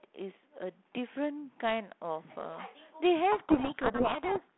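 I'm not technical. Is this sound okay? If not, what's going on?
No. From about 3.32 seconds to the end, the speech sinks under a harsh, grinding distortion. This is a codec payload misread. The call uses G.726, a phone codec that turns speech into small numbers. Here the receiving end reads the bits of each number in the wrong order. The decoder gets values that look valid but are wrong, so it rebuilds noise instead of clean speech. It stays broken until the clip ends.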